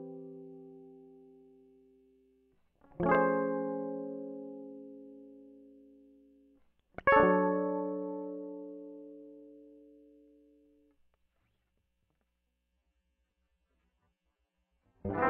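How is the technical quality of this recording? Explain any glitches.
One glitch stands out near the end. From 12.72 s to the close, the music shifts to an adaptive stream at a lower bitrate. The player switched to a cheaper version without a gap. Codec artefacts thicken. This fits a drop from roughly 96 to 16 kbit/s AAC.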